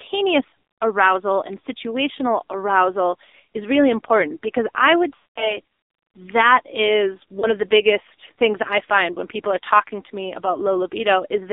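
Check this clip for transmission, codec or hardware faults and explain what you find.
Two faults are audible: AMR narrowband mobile codec damage across the whole clip, and lost AMR speech frames at two points.

The AMR narrowband mobile codec is present from start to finish, and the damage is heavy. The speech is confined to a telephone band of roughly 300 Hz to 3.7 kHz, with nothing above. The coder rebuilds the voice from a vocal-tract model excited by sparse pulses, and at this low rate it sounds buzzy and synthetic, which points to a bitrate near 5.9 kbps. A plain low-pass filter would dull the sound without adding this buzz.

Lost AMR speech frames occur twice. The first runs from 5.16 to 5.59 s, between "important because I would" and "that is". The decoder keeps repeating its last pitch and vocal-tract settings while the gain falls, so the sound is drawn out and then sinks to silence over about 0.2 s, which fits a run of about ten 20 ms frames. 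Speech returns briefly weak. The second, from 7.40 to 7.48 s, between "that is" and "of the biggest things", is a single frame and produces only a short dip or warble. A network dropout would cut off abruptly, but here the sound smears and fades.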